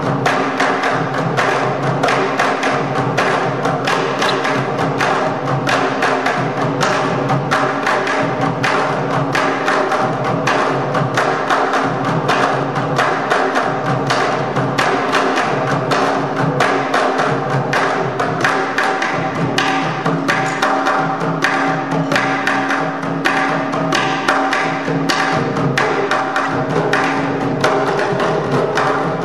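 A short burst of misplaced energy cuts into the sound from 4.28 to 4.33 s and again from 26.44 to 26.47 s. Each is a corrupt frame decoded: flipped bits in the compressed data were played anyway, scattering energy across wrong frequencies for about two frames, then one.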